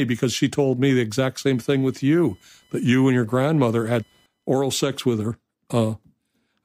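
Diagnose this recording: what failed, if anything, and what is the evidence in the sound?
The failure is in the analogue wiring: computer activity noise enters through the shared ground. From 1.41 s to 4.47 s, between "told me the exact" and "oral sex with her", a faint chirping buzz sits roughly 40 dB below the speech, pulsing at around 1 kHz. On a spectrogram it appears as a comb of fine vertical striations across the band, independent of the speech energy. Processor or peripheral load currents modulate the ground reference and leak into the signal path.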